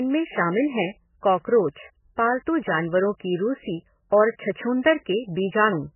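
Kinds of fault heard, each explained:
MP3 compression: throughout the clip, the speech has nothing above 3 kHz and a heavily watery, swirling texture, as weak frequency lines drop in and out between frames. This is likely MP3 encoding starved of bits, fitting a bitrate near 9 kbps.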